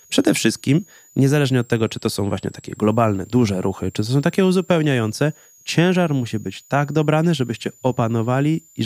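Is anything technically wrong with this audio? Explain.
Yes, there's a switching supply whistle running through the whole speech clip. A power supply is running in an audible burst mode or beating with another supply, leaving a thin high whistle that wanders between about 6.5 and 7.8 kHz, sitting roughly 30 dB under the speech.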